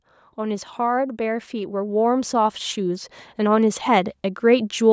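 From 0.05 s to 4.76 s, the level climbs steadily. This is automatic gain rising. The gain control judged the incoming speech too quiet and kept turning itself up. The rise totals about 8 dB over more than four seconds. Voice and background noise swell together, because the control lifts everything it receives. The background grows along with the speech. The call microphone path's band limit, with nothing above 8 kHz, stays constant throughout.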